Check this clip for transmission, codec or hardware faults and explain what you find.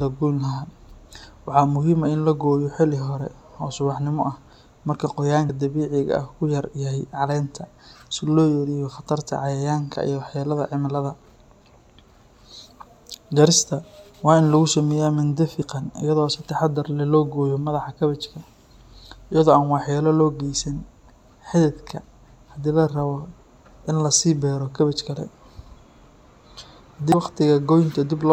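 One fault turns up, near the end of the speech. Compressed frames skipped at 27.12 s: a short run of coded frames never reaches the output, either because it is missing from the stream or because the decoder rejected it as corrupt, so playback leaps forward by about 70 ms, which points to a few whole frames being lost. The splice sounds like a small jump in the speech.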